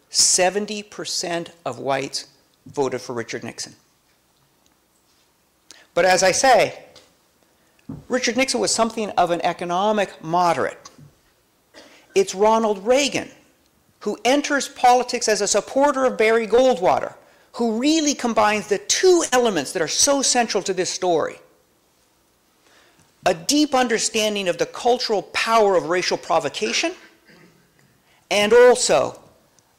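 At 16.55 to 16.59 s a brief smear interrupts the sound, lasting only a few hundredths of a second. This is short concealed packet loss: about 20 ms of audio did not reach the decoder in time, and the receiver covered the hole by extending the preceding sound for roughly 19 ms, following its pitch or shaping noise to match, before blending back into the real signal.

From 19.25 to 19.36 s the sound is replaced by a held buzz or hiss that fades as it goes on. The audio then picks up slightly further along than where it stopped. This is a burst of packet loss: about 60 ms arrived too late or not at all, and the receiver filled the gap with about 67 ms of synthesized continuation, turning it down as the gap went on. About 8 ms of the original material was skipped when playback rejoined the real stream.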